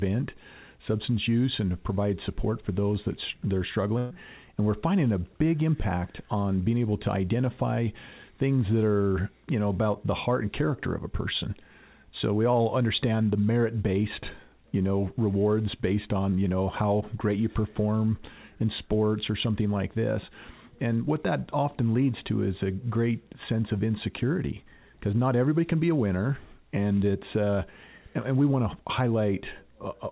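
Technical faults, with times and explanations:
3.98 to 4.13 s, burst of packet loss: about 120 ms of audio never arrived, so the receiver stretched the last sound and faded it, leaving a brief smeared continuation rather than silence. The audio then resumes with that stretch skipped, unlike a plain blank dropout.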